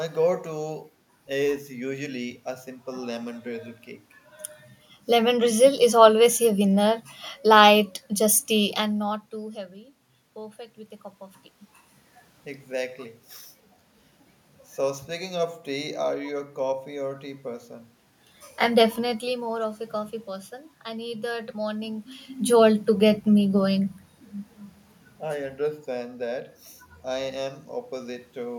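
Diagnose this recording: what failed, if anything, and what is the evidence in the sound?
Nothing stood out on listening to this speech recording, and there is no failure to attribute to any stage of the chain.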